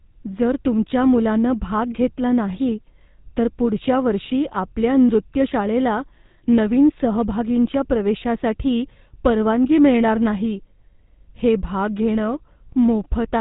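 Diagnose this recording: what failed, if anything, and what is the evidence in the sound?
The codec stage is where this went wrong: the whole recording has gone through the GSM full-rate codec. You hear a buzzy, gravelly roughness on the speech from start to finish, and nothing survives above 4 kHz, so it sounds dull and phone-like. The codec rebuilds the voice from a vocal-tract model fed with sparse, regularly spaced pulses, which causes the grit. The damage is plainly audible, which fits a 13 kbps rate.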